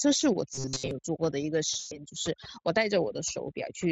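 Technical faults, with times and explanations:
Throughout: overdone noise removal, with bands clamped near the noise floor, leaving a lowered background with twinkling specks.
0.54 to 0.91 s: robotic sound from repeated short buffers, a rigid metallic buzz at 133 Hz, likely from short stretches of audio being replayed while fresh audio arrives late.
1.79 to 1.99 s: VoIP packet loss concealed by the speech codec, where about 120 ms is extrapolated into a fading buzzy tone or coloured noise, and the voice stays weak briefly after audio resumes.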